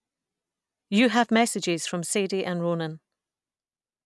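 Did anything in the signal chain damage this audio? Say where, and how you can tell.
No, nothing in this chain audibly damaged the speech. None of the stages from capture through to playback leaves a mark that can be heard here.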